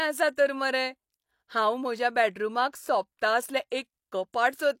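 At 3.70 s there is pre-echo. A sharp attack in the speech arrives late in a codec block. The quantisation noise meant for that loud onset spills back into the quiet moment before it. About 17 ms of hiss leads in, and the attack sounds smeared.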